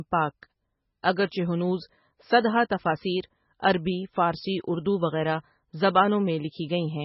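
From start to finish the speech carries heavy MP3 compression artefacts, likely from encoding at a very low bitrate, around 16 kbps. Nothing survives above 5.6 kHz, so sibilants turn dull and watery. A spectrogram shows a flat ceiling at 5.6 kHz and flickering, patchy gaps below it.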